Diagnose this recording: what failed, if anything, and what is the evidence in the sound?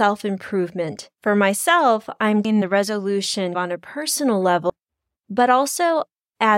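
The recording or buffer stage most likely loses audio each time it closes one 2.5-second chunk and opens the next, causing audio missing between chunks. The speech skips abruptly at 2.45 and 4.70 s. Each skip loses about a third of a second, with the two sides joined directly and no silence between them.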